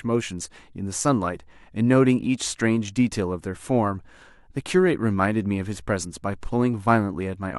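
Speech recording with no technical faults audible anywhere.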